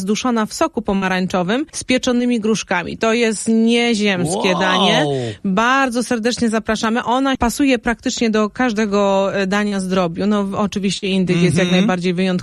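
At 0.95 s a burst of packet loss drops about 60 ms. The receiver stretches the last sound into a fading buzz or hiss before the audio resumes further on, longer than a smear. Short concealed packet loss follows at 2.18, 9.68 and 10.98 s, gaps of 20 to 40 ms, each filled with continued sound and blended back as a brief smear or wobble. From 8.49 to 11.28 s, a steady 50 Hz mains hum sits around 30 dB below the signal. Unlike those momentary glitches, it is a constant low tone.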